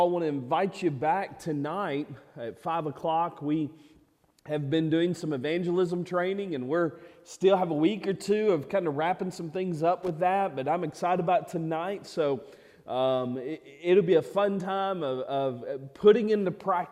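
At 10.03 to 10.09 s a short burst of loose connector crackle breaks in: a worn or dirty contact rapidly makes and breaks, chopping the signal into a ragged scratch. Unlike a single digital click, it is irregular and grainy across those 65 ms.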